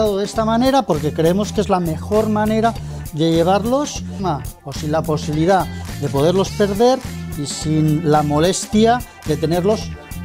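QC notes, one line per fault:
4.19 s, skip ahead: playback jumps forward with no gap at the join, and about a second of audio is missing. A stretch was dropped while later audio was already queued, so the material on either side is spliced almost directly and the delay drops by roughly that amount.
4.29–9.73 s, jitter buffer speed-up: the audio runs at 106% speed with pitch unchanged and sounds hurried. The buffer was holding more than its target, so the receiver repeatedly cut short pitch-period-length pieces, removing around 0.4 s in total to bring the delay back down.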